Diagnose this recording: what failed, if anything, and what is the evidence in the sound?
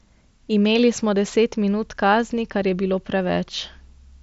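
Nothing failed here: the speech went over a Bluetooth mSBC headset link, which is why nothing reaches above 7.7 kHz, and that ceiling is simply how that wideband headset codec works.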